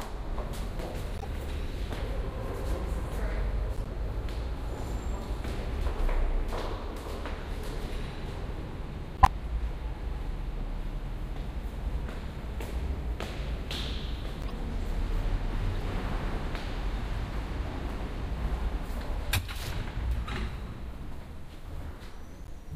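Short chirps and noise bursts break in six times: 1.18 to 1.25 s, 3.76 to 3.87 s, 9.17 to 9.28 s (by far the loudest, peaking around -5 dBFS), 14.42 to 14.50 s, a faint blip at 15.80 s, and 22.44 to 22.49 s. Each is a corrupt frame decoded. Flipped bits in a few compressed frames were played anyway, so misread codes and gains scattered energy into the wrong frequencies for those frames.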